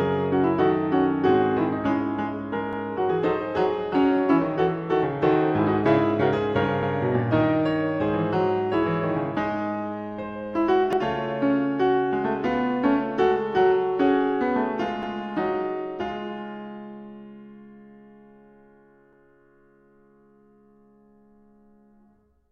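This music clip has overlapping chunks: it was handled in 4 s blocks, each starting 100 ms before the previous one finished. That 100 ms replays at every join, at 2.73, 6.83, 10.93, 15.03 and 19.13 s, producing a regular stutter.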